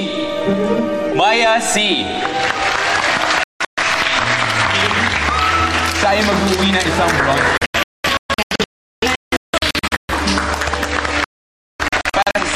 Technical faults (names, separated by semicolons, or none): digital broadcast dropout